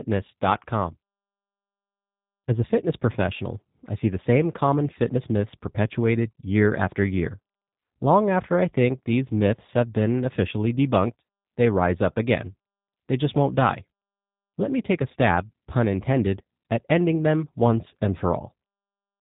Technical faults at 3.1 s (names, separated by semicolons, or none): G.729 codec